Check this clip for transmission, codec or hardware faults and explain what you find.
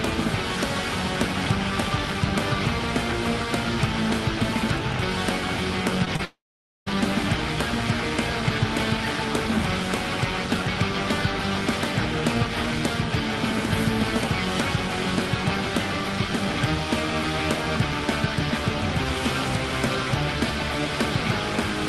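There's a cluster of network trouble just after the six-second mark: two short concealed packet losses leading straight into a longer dropout. The call codec's band limit is audible too, with nothing above about 12 kHz, which fits Opus running around 40 kbps.

Short concealed packet loss, at 6.05 to 6.08 s and again at 6.16 to 6.21 s. Each time a couple of hundredths of a second of audio didn't reach the decoder in time, so the receiver patched the hole by stretching the last bit of sound forward and then blending back into the real signal. What you hear is a quick smear or wobble rather than a gap, and the second one runs a little longer.

Long network dropout, from 6.25 to 6.88 s. This is likely a proper network outage, with well over half a second of audio never arriving. The receiver first carries the last sound on as a fading buzz or hiss, but that gives out fast and you're left with about half a second of silence. 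The sound then picks up again at 6.88 s, and whatever fell in that stretch is simply gone rather than delayed.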